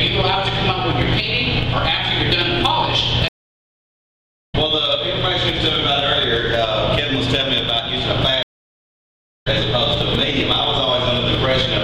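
At 3.28 s and again at 8.43 s a stream reconnect cuts the sound to silence for 1.25 s and 1.03 s while the player rejoins, then a fresh decoder picks up later, about a second ahead and roughly 0.7 s ahead. Both show as flat, empty waveform gaps with abrupt jumps in content.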